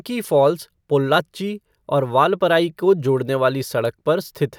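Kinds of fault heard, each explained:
No kinds of fault are heard in this speech clip.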